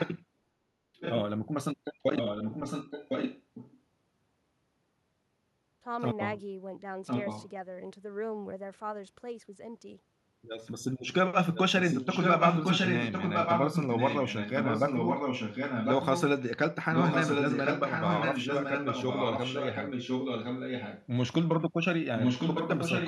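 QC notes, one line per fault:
0.0–0.19 s, 1.0–1.21 s, 2.16–3.8 s, 7.06–7.49 s, 11.54–11.6 s, 11.81–16.22 s, 16.93–21.06 s and 22.17 s to the end: echo leak. A delayed copy of one voice returns about 1.06 s after the original, ranging from about 15 dB below the speech to roughly level with it, loudest at 11.81–16.22 s and at the end. The likely cause is a far-end loudspeaker whose echo canceller let residual pickup through and sent it back.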